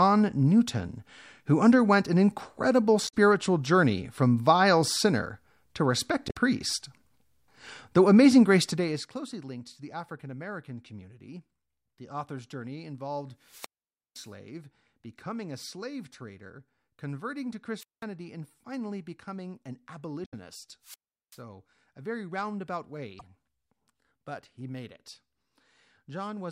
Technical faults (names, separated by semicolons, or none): damaged data in a compressed stream; zipper noise; wireless microphone squelch dropout